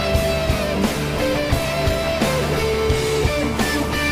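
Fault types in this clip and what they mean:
No faults can be heard anywhere in this clip.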